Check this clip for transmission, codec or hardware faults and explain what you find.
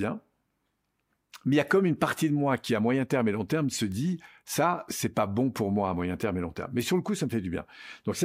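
Two bit error spikes are audible in the speech, both isolated single-sample events. The first is at 3.92 s, between "et long terme se" and "ça c'est pas bon", peaking at about -24 dBFS. The second is at 6.23 s, between "pour moi à moyen" and "et long terme", at about -18 dBFS. In each, one flipped bit in storage or on a digital link shifts a single sample by a power of two before the waveform returns. Each is heard as a sharp, broadband tick unrelated to the speech.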